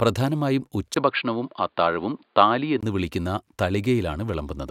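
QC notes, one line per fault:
0.94–2.83 s, input switched to a poorer device. At 0.94 s the speech turns dull and boxy after a short gap of about 20 ms. Nothing above 4.8 kHz gets through in this stretch. A faint new background noise sits well below the speech. The loudness stays about the same. At 2.83 s the full bandwidth returns. The likely cause is the recording input moving to a narrower-band microphone or headset profile, then back.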